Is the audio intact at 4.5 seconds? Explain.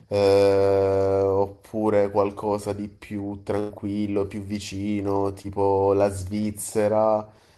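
Yes, the audio at 4.5 seconds is intact, with no dropout, click, distortion or other technical fault audible at that point in the speech.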